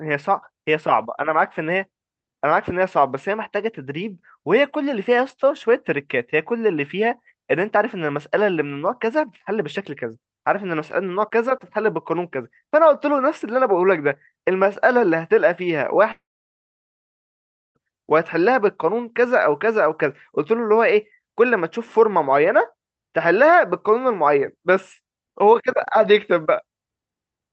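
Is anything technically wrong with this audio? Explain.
Yes. From 16.11 to 17.77 s there is a long network dropout, likely caused by audio failing to arrive over the call link. About 1.6 s is lost. The receiver briefly extends the last sound as a fading buzz, then leaves roughly 1.5 s of near-silence before the speech resumes further on. Unlike a short packet-loss glitch, the concealment gives out and the missing stretch is simply gone.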